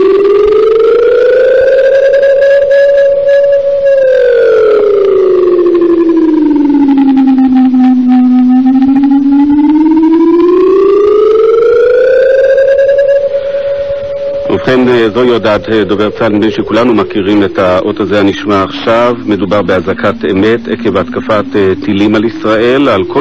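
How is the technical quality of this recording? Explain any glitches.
No glitches or technical faults can be heard anywhere in the recording, so there is nothing to explain.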